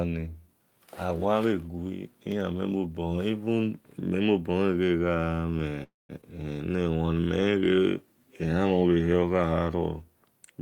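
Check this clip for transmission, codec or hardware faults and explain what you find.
There are three network-related faults clustered between about 5.8 and 7.7 seconds. All are transmission problems, with nothing pointing to the codec or hardware.

From 5.83 to 6.12 s there's a call audio freeze. The tail of the last sound carries on as a fading buzz or hiss and then drops to silence for about 0.18 s. The likely cause is packets held up in transit, leaving the jitter buffer empty. When they arrived, the audio resumed where it left off, so nothing's lost, just a pause inserted.

Right after, at 6.21 to 6.25 s, there's a skip ahead. Playback jumps forward with barely a gap, and roughly a fifth of a second of speech is gone, the two sides spliced almost directly. Some audio was dropped while later packets were already queued, which fits the receiver catching up after the freeze.

From 6.72 to 7.73 s there's a jitter buffer slow-down. 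The speech runs at about 84% speed with the pitch unchanged, so sounds get drawn out and may warble slightly. The receiver repeated single pitch periods to rebuild its reserve, adding 173 ms in total.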